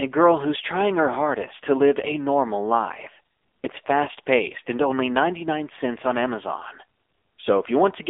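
From start to end the speech carries the AMR narrowband mobile codec, with heavy coding damage. The band runs from about 300 Hz to 3.6 kHz, with nothing above 3.7 kHz. The buzzy, synthetic texture points to a low AMR-NB mode around 6.7 kbps, where few pulses drive the vocal tract model. A simple telephone filter would narrow the band the same way but leave the voice natural, so the buzz is what marks this as a codec fault.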